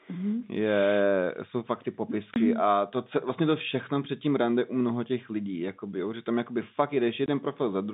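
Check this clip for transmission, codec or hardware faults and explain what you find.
The clip has two short dropouts from packet loss filled with silence, heard over a G.711 telephone line that keeps the sound inside roughly 150 Hz to 3.7 kHz.

Packet loss filled with silence, at 2.34 to 2.36 s and 7.26 to 7.28 s: an audio packet went missing and the receiver inserted silence. Each gap lasts 20 ms, which fits a single lost 20 ms packet. The speech cuts out abruptly, with hard edges.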